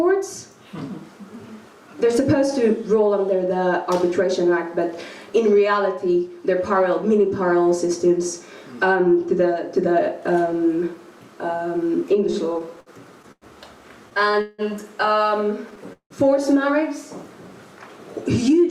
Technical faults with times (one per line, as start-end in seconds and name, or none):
12.31-13.45 repeated stalls (stutter)
14.10-14.61 repeated stalls (stutter)
15.93-16.13 call audio freeze